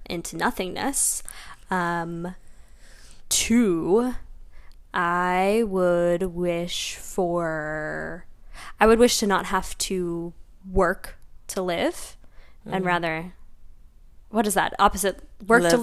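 Nothing in the recording points to a technical fault, so there's nothing to flag on this one.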